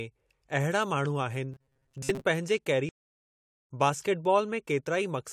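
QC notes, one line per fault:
1.52 to 2.24 s, robotic sound from repeated short buffers: the speech turns into a rigid metallic buzz pinned at 134 Hz, loosely tracking the words. That's likely new audio arriving too seldom, with a chunk of about 7.5 ms looped to fill the gaps, and most of the real material skipped.
2.89 to 3.70 s, playback stall: the speech cuts out mid-flow and sits silent for about 0.81 s before carrying on. Sounds like the player likely ran dry of data or had its thread blocked, so output simply stopped until it recovered.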